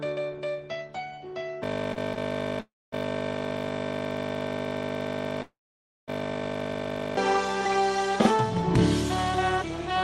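At 1.64 s a system hang loop begins and runs to 7.17 s. The machine stopped feeding new audio while the hardware kept replaying one 20 ms stretch of its buffer, about 225 times. This gives a steady 50 Hz buzz. Unlike a stall, the same slice repeats exactly rather than fading.

Within that span come two short stalls from a late packet, at 1.93 to 1.98 s and 2.14 to 2.18 s. In each, the receiver held the last sound for 28 ms and then 18 ms until the packet arrived, then carried on with nothing lost. Each is only a brief held sound.

At 2.60 to 2.94 s and 5.42 to 6.10 s the pattern is a call audio freeze, likely caused by packets held up in transit that emptied the jitter buffer. The last sound is stretched out and fades to silence, lasting 230 ms in the first and 540 ms in the second. The audio then resumes where it stopped. These are far longer than the stalls and end in silence.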